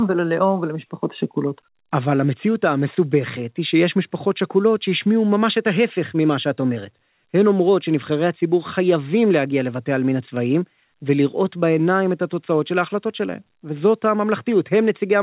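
No technical faults can be heard in the speech. It carries the narrow telephone-band sound of a G.711 A-law call path at 64 kbps, with nothing above 4 kHz.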